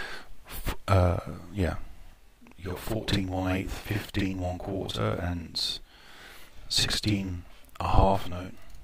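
From 2.13 s through to the end, there's a channel delay doubling. One channel is running about 46 ms late, which fits a 2048-sample buffer, and after the mono sum that late copy sits right alongside the original as an equal-level slap, so everything sounds doubled.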